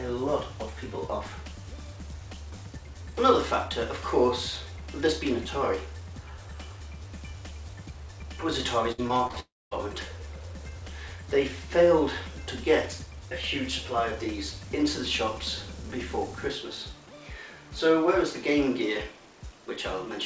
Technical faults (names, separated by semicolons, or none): repeated packet loss (robotic sound); long network dropout